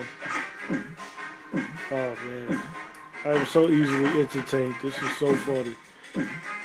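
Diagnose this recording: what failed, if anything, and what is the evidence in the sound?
Nothing in the recording stood out as a failure on listening, at any stage from capture through to playback.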